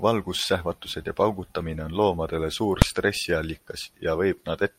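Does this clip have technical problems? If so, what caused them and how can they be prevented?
Yes: a single loud bang at 2.82 s, just after "paugutamine on loomadele suur", is invalid numbers at full scale. A calculation produced infinite or invalid values that pinned the output to one extreme value for about 2.7 ms, which fits a 128-sample block. Checking for and replacing non-finite values before output, and guarding divisions and feedback paths, prevents it.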